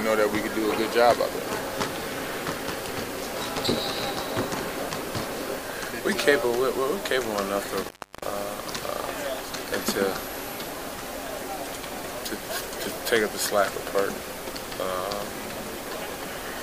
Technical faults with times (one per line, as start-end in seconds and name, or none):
7.83-8.24 intermittent contact